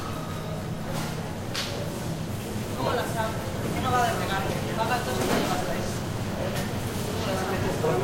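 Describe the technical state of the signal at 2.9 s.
At 2.9 s the signal is intact, with no dropout, distortion or other technical fault audible at that point in this recording of everyday sound.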